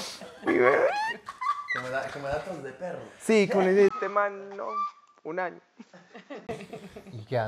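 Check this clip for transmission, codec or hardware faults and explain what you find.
There's one fault: the input switched to a poorer device, from 3.89 s to 6.49 s. A 20 ms gap at 3.89 s marks the switch, and the sound then drops by about 10 dB and turns dull, with nothing above 7.6 kHz. A new, fairly quiet background noise also comes in, roughly 35 dB down. This is likely the system jumping to a narrower-band microphone or headset profile, and the fuller sound returns at 6.49 s.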